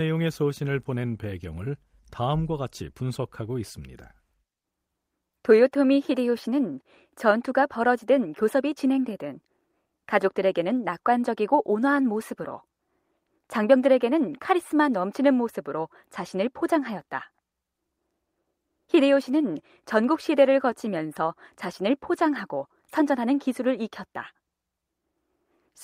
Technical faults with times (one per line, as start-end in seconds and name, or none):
none